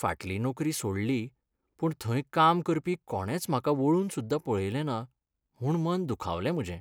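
No technical faults can be heard in the speech.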